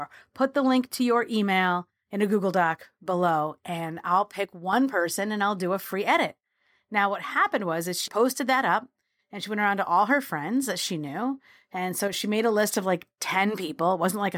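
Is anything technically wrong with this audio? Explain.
Yes. The speech abruptly drops by about 6 dB from 4.45 to 4.73 s, before "person and I'll do", and from 12.08 to 12.13 s, before "she made a list". This is likely one channel dropping out before the mono sum. The sound gets quieter rather than going silent, which sets it apart from a full dropout.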